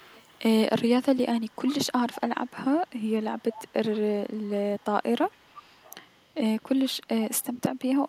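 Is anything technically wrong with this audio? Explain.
Yes, there's an echo leak: a faint copy of the speech about 448 ms late, quietest at 0–0.39 s and 5.3–6.21 s, clearer at 1.38–1.75 s and 2.12–2.52 s, with a long stretch at 2.87–4.84 s. It's likely a far-end loudspeaker echo the canceller didn't fully remove.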